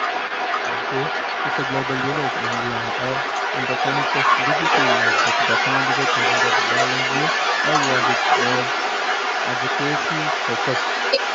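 From the very start to the end of the speech, a second voice runs alongside the main talker. It sits roughly 5 dB louder than the main talker. This is the other side's voice leaking through. The likely cause is the far end playing out of the talker's loudspeaker and reaching the microphone. The echo canceller then failed to strip it out. Both voices share the same narrow call band, topping out near 8 kHz.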